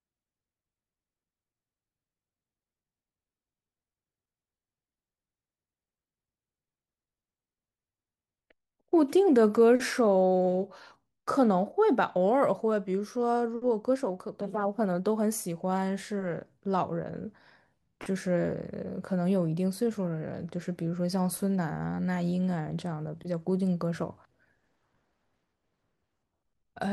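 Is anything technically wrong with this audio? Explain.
No, no technical faults heard.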